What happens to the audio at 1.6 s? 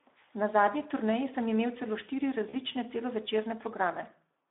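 At 1.6 s the Speex codec is at work, as it is throughout the clip. It is starved of bits for the excitation, which fits a bitrate around 11 kbps, so the speech sounds noisy and hoarse, confined to a narrow telephone band of roughly 300 Hz to 3.6 kHz.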